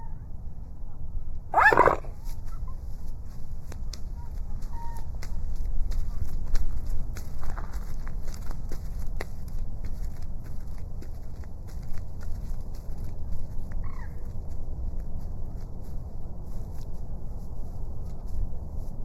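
From start to finish, the sound carries channel delay with comb filtering. One channel runs late by a tiny fraction of a millisecond, roughly 0.15 ms. When both channels are folded to mono, the shared content partly cancels at evenly spaced frequencies. The first notch sits near 3 kHz, with more repeating higher up. The result is hollow and phasey. Presence and bite are thinned, and the coloration never moves.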